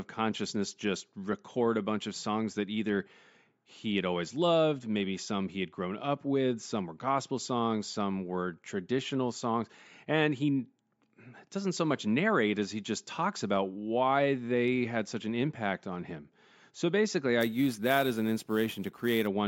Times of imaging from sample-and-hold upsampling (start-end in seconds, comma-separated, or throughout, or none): 17.41-19.27